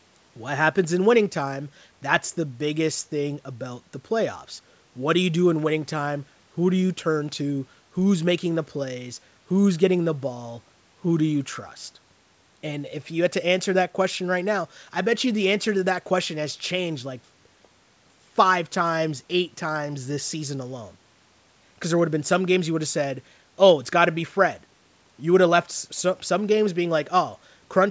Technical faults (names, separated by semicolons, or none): none